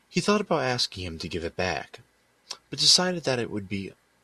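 No technical faults can be heard in this speech recording. There is no moment in it that needs to be marked with a time.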